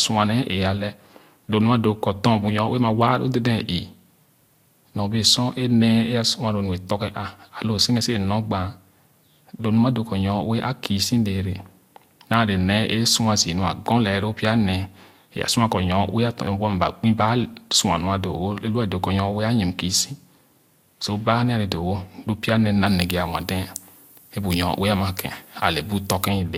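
From 22.87 s to 26.28 s the speech has pre-emphasis left on. The treble boost matches a 50 µs FM curve, but no de-emphasis follows, leaving 10 kHz about 11 dB hot relative to 1 kHz. The voice turns thin, bright and sibilant.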